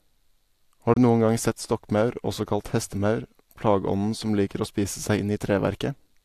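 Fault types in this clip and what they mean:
Digital broadcast dropout: the receiver stopped getting usable data, or a frame failed its integrity check, so it muted the output until valid frames resumed. In this speech clip the sound fades to silence over about 3 ms at 0.94 s and returns at 0.97 s, just before "du noen gang sett". The gap is about 24 ms, which fits a single lost frame. The audio carried during that gap is gone, not delayed.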